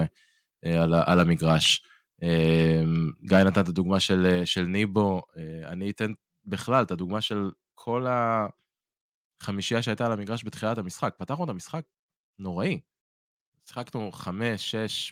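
A speech recording with harsh, crackling distortion on its loudest syllables from 0.94 to 1.73 s, 3.32 to 3.6 s and 4.12 to 4.27 s, the signature of microphone overload, most likely from an input gain set so high that peaks drive the converter past full scale. The peaks overshoot by about 4, 7 and 1 dB respectively, so the middle burst is the worst, with a couple of percent of samples flattened against the ceiling. On a waveform those stretches show squared-off tops pinned at the same level, and a spectrogram shows brief smears of broadband energy reaching into the upper kHz range. Interleaved with this is microphone volume stepped down: the whole signal, voice and background alike, drops abruptly at 3.36 s by about 2 dB, at 4.35 s by about 4 dB, and again at 5.37 s and 7.17 s by about 2 dB each. The first two steps sit right on or just after distorted peaks, consistent with call software reacting to the clipping by cutting the device's input volume in single steps. 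A waveform shows a sudden narrowing of the envelope at each step, and the spectrogram darkens uniformly across all frequencies at those instants.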